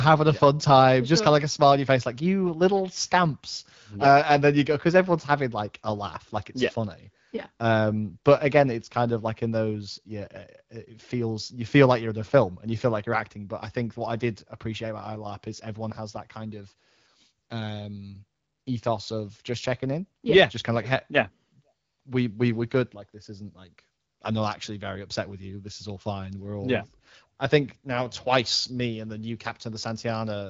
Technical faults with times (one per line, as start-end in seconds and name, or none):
none